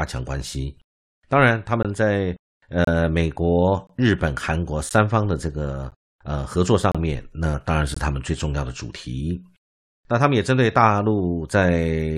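Right through the first eight seconds of this speech there's a gap between stream segments, roughly once a second: at 0.83, 1.83, 2.85–2.87, 3.87–3.89, 4.89, 5.91, 6.92–6.95 and 7.94–7.97 s. The timestamps of consecutive one-second segments don't quite meet, so the player pads the difference with silence. You hear hard-edged dropouts of about 5 to 29 ms, but nothing actually goes missing.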